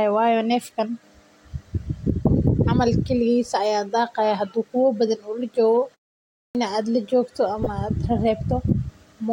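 At 6.5 s, after a pause of 0.62 s, the output device had dropped into a sleep state and was slow to wake, producing a clipped start after a pause. About 49 ms of the returning speech was swallowed, so the sound snaps in abruptly from silence without its opening.

From 7.63 to 7.67 s, a corrupt frame was decoded: damaged bits in a few compressed frames were played as if valid, misplacing energy across the spectrum. For those 40 ms the speech carries a brief chirp, squeak, blip or burst of noise.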